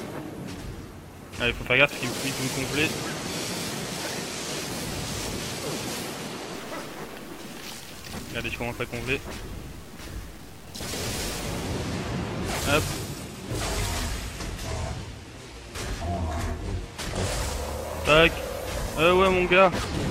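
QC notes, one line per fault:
6.54–11.37 s, low bit depth without dither: grainy grit that tracks the sound, quiet parts sputtering; likely undithered truncation, consistent with 7 bits, error roughly 25 dB down.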